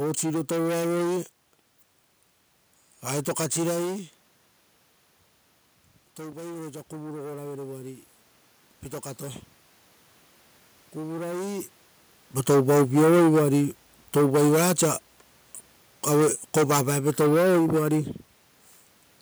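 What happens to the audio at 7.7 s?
At 7.7 s the automatic gain is rising, a ramp that runs from 6.17 to 8.09 s. The input level had dropped by about 13 dB, and the automatic gain control responded by raising its gain gradually, by about 5 dB over those two seconds. Voice and room noise swell together as the gain climbs, giving a slow lift in overall level rather than a sudden jump.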